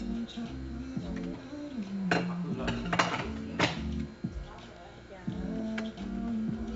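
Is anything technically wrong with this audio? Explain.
Yes. Throughout, a gritty hiss rides on every loud sound and swells and fades with the level, with nothing above about 7.7 kHz. This is heavy 4-bit ADPCM compression, which fits 64 kbps: each sample is a coarse step from a prediction, so the error tracks the signal.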